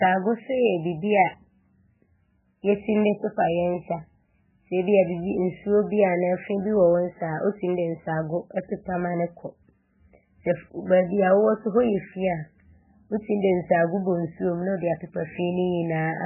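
Throughout the clip, a starved MP3 encoder, likely running near 8 kbps, has discarded everything above 3 kHz and dropped weak frequency lines frame by frame. The heavy MP3 compression leaves the speech dull and muffled, with a watery, swirling texture and smeared consonant onsets.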